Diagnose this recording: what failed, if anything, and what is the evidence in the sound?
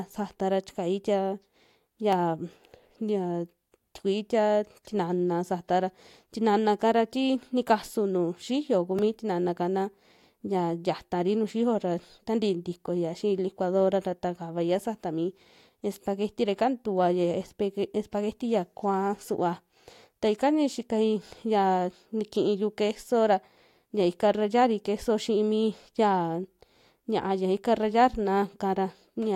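Block of digital silence at 2.13 s (0.25 ms) and 8.99 s (2 ms): a buffer-stage underrun zeroes samples abruptly, giving a tick in the speech.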